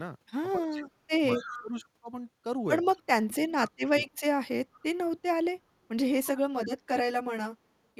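Right from 0.56 to 1.1 s the speech sinks by about 25 dB, chopping out roughly half a second. That's speech suppressed in double talk, likely the echo canceller hearing the far side come in at the same time, failing to tell its own talker from the loudspeaker echo, and ducking everything. It happens again at 1.38 to 1.74 s (about 20 dB down), at 3.27 to 4.13 s, the longest at about 30 dB, and briefly at 6.52 to 6.72 s, where it drops around 35 dB.

Overlapping that second dip, from 1.35 to 1.63 s, you get a ghost of the voice trailing 211 ms behind, about 15 dB under the speech. That's an echo leak, likely a speakerphone on the other end whose canceller didn't scrub out everything its mic picked up, so a delayed copy came back down the line. Two more scraps turn up much quieter, at 2.93 to 3.02 s (about 35 dB down) and 4.73 to 4.84 s (about 30 dB down), same 211 ms lag.

From 6.23 s to the end the sound turns hollow and phasey. 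That's channel delay causing comb filtering: one channel runs roughly 10 ms late, and when the two are folded to mono the shared content cancels at evenly spaced frequencies, the first notch down around 50 Hz and more every 100 Hz or so above it, giving that fixed, hollow colour.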